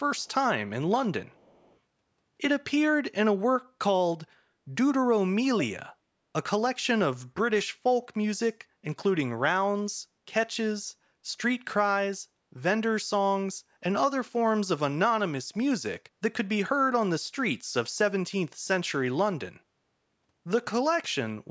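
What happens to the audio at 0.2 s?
A very faint, delayed copy of the speech trails by about 0.4 s from 0.16 to 0.34 s, an echo leak, likely from a loudspeaker's echo canceller letting pickup through.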